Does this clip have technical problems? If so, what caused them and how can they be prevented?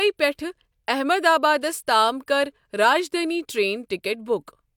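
No, there are no technical problems in this speech clip. Nothing needs to be prevented.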